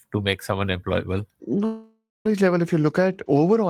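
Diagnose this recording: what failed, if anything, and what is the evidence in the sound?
From 1.65 s the speech stops abruptly and the final sound is drawn out as a fading buzzy tail, decaying into about 0.22 s of silence before the speech picks up at 2.26 s, with that 0.6 s stretch simply absent. This is likely a long network dropout: packets stopped arriving, the receiver's concealment extended the last received audio until it ran out, and playback resumed at later audio without recovering what was lost.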